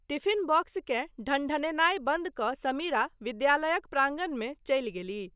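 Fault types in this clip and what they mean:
No technical faults are audible in this speech.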